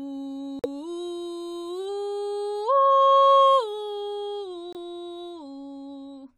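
At 0.59 s the music drops into a hard silence until 0.66 s, and again from 4.73 to 4.77 s: corrupt frames muted. Damaged compressed frames were rejected by the decoder and replaced with digital silence. The 66 ms and 40 ms gaps fit whole frames of roughly 20 ms, three and then two. Unlike a buffer underrun or a skip, the music resumes exactly on time, and unlike concealment the gap is not filled with smeared sound.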